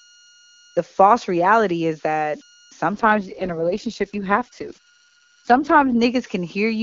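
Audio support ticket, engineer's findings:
Converter idle tones throughout: whistle near 1.5 kHz in pauses, grainy noise under quiet passages, about 29 dB below signal. Spectrogram shows a thin steady line around 1.5 kHz through the gaps. Probable cause: undithered delta-sigma ADC cycling in repeating bit patterns at low input.

AMR rate drop from 2.95 to 5.97 s, right after "false reality is that": voice turns rough and synthetic, with bandwidth unchanged and no gap. Sound fits the link falling from 23.85 to 6.6 kbit/s. Spectrogram shows smeared harmonics and blotchy upper-band texture.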